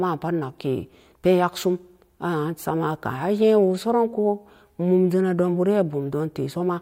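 Nothing stood out on listening to the speech in this clip.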